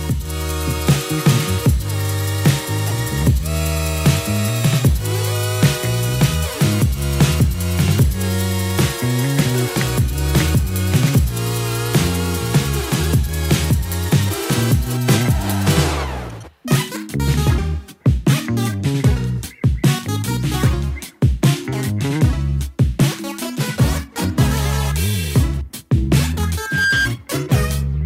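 Near the end, from about 26.57 to 27.12 s, a loudspeaker feedback squeal kicks in. The mic is catching its own speaker and the loop gain tops unity at 1.6 kHz. That tone swells over roughly a third of a second until it's about as loud as the program.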